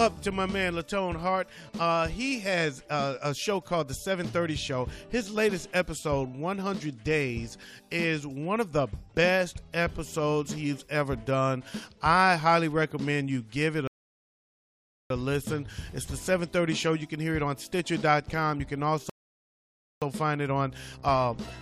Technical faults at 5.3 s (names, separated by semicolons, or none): none